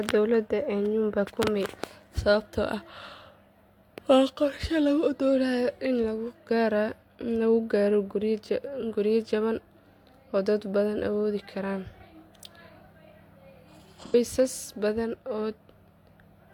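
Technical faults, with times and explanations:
6.97–7.02 s and 14.00–14.15 s, AAC frame loss with concealment: 43 ms and 85 ms gaps, fitting one and two lost frames, are filled from the last good spectrum, giving brief smeared, phasey patches rather than clicks or dropouts to silence.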